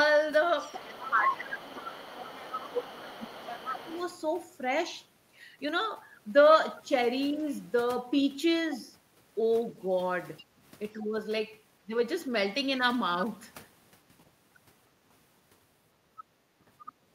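From 0.6 to 3.98 s, the other side's voice leaks through. It sits about 15 dB under the talker. The echo canceller likely missed part of the loudspeaker signal. Over the same stretch, 0.96 to 3.92 s, the speech is suppressed in double talk. Both sides overlap. The talker's voice dips by around 10 dB in pieces, for about two seconds in all. The canceller likely turned down its own talker along with the echo.

At 10.37 to 10.44 s, a faint scrap of the far voice leaks through. It is some 25 dB down, likely leftover echo. Right after, from 10.44 to 10.59 s, the background is gated by the echo canceller. The room sound drops by about 8 dB for 150 ms, then returns.

Speech is suppressed in double talk twice more. From 11.01 to 11.15 s it dips roughly 10 dB. From 11.83 to 11.94 s the cut goes deeper, around 15 dB. These are likely brief overlaps with the far side. Each chops the voice for a moment.

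At 16.86 to 16.92 s, a last brief scrap of the other side's voice leaks through. It is faint, roughly 25 dB down, likely residual echo.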